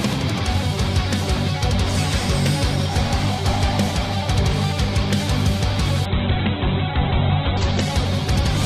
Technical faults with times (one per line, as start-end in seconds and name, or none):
6.06-8.65 call bitrate drop